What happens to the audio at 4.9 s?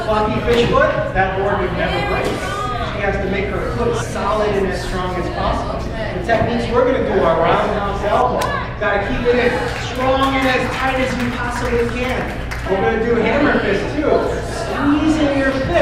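Nothing goes wrong at 4.9 s; the audio plays through that moment intact, with no dropout, click or distortion.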